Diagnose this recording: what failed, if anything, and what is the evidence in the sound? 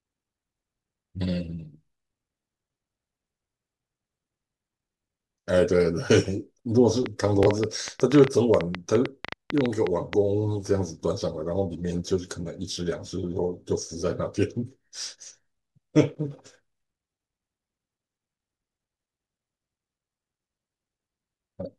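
Interference was likely getting into the analogue wiring or a struggling interface from 7.06 to 10.14 s. It laid a train of clicks over the speech, about 30 similar pulses at roughly 7.8 per second and irregularly spaced, standing well above the speech and ticking through pauses too.

The Bluetooth link dropped data twice, at 7.43 s and 12.73 s, and the receiver replayed its last buffer to fill each gap. Each Bluetooth stutter is a brief repeat of about 23 ms, which fits a single lost packet, before the speech resumes further along.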